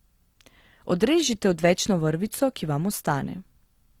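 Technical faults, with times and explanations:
Throughout, Opus compression: the speech was likely squeezed through Opus at a low rate around 24 kbps in its music mode, which keeps each band's energy but fills starved bands with folded or noise content, so the voice sounds rough and grainy rather than swirly, with full bandwidth reaching about 20 kHz.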